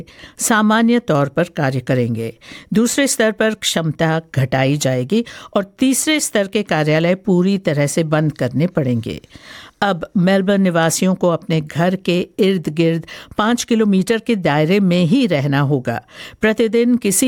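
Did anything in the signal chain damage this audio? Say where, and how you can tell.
Yes. A block size mismatch (truncated) at the driver or buffer stage runs through the whole clip. A steady buzz at about 46.9 Hz sits under everything, which fits 1024-sample blocks at 48 kHz. Each block loses only a tiny tail, so the audio keeps its normal speed and pitch. Mains hum would sit at exactly 50 or 60 Hz as a smooth tone. This buzz is rougher, made of clicks at the block seams, and it has no silent gaps like an underrun.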